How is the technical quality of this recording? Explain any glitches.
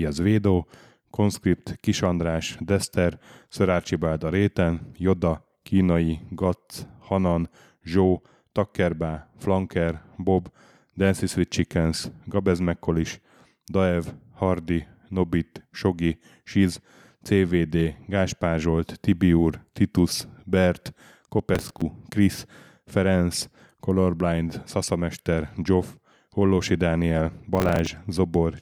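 Two brief bursts of processor overload crackle occur, at 21.55–21.82 s and 27.55–27.87 s. In each, a run of about fifteen missed buffers of around 5 ms replays stale audio with hard edges, heard as gritty tearing. Spectrograms show dense vertical broadband streaks; waveforms show jagged discontinuities.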